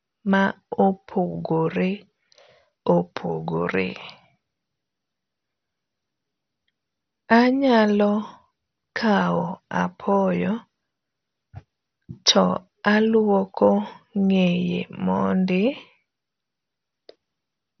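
From start to finish the speech is dull, with nothing above 6.1 kHz, and carries a heavy gurgling, granular distortion as upper bands flicker in and out. This is likely MP2 compression starved of bits, consistent with a rate near 48 kbps.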